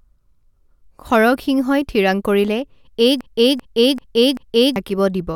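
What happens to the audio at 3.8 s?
A broken-record loop runs from 3.21 to 4.76 s: a 0.39 s fragment of speech repeats four times, identically and without decay, unlike an echo, likely from a stalled stream.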